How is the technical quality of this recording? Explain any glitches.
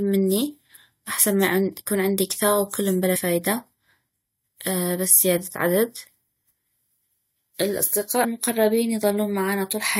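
One glitch affects the recording. Compressed frames skipped at 8.23 s: about four 23.2 ms frames never play, so roughly a tenth of a second of speech vanishes and the speech jumps abruptly ahead.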